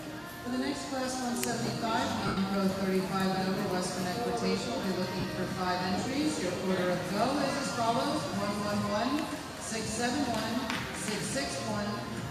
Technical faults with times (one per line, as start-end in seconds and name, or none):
2.27-2.37 lost LE Audio frames
5.20-5.24 lost LE Audio frames
8.28-8.33 lost LE Audio frames